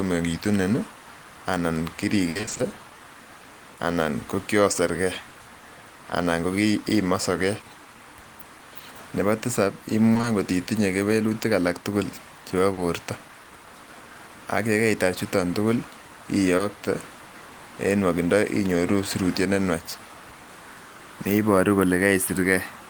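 From 2.29 to 2.61 s the speech breaks up with repeated packet loss, giving a robotic sound. Audio arrived late or not at all seven times in that third of a second. Each gap was patched by extending the last sound, and the longest gap was 60 ms. About 180 ms was patched in all, more than half of the stretch. The result is choppy, with pieces of speech missing.

Short concealed packet loss follows at 5.29 to 5.37 s, 10.13 to 10.25 s, 12.73 to 12.79 s and 16.57 to 16.61 s. Each hole lasts only 20 to 40 ms. The receiver filled it by continuing the preceding sound and then blended back into the real audio. Each one is heard as a brief smear or wobble. The two longer stretches, at 5.3 and 10.1 s, come from back-to-back losses.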